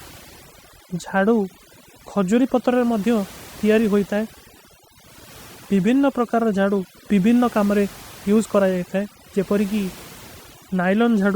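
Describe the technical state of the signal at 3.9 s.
Overdone noise removal, running throughout the clip, is active at 3.9 s. Frequency bands near the noise estimate are cut too hard, leaving a lowered background that breaks up into twinkling specks.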